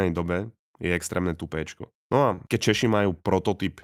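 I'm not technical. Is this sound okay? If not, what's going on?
No. At about 2.35 to 2.39 seconds there is a short concealed packet loss. A tiny piece of the speech, about 20 milliseconds, never arrived in time, so the receiver filled the hole by stretching the sound just before it and then blended back into the real speech. You hear a quick smear or wobble rather than silence. An ordinary dropout would leave a brief gap of nothing, and a click would be a sharp snap.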